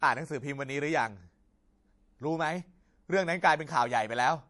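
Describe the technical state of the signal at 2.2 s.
At 2.2 s you're hearing MP3 compression artefacts, which run through the whole clip. Nothing gets through above 11.4 kHz, so the speech sounds dull, with a plainly audible watery swirl where weak frequency lines drop in and out between frames, likely from a low bitrate around 48 kbps.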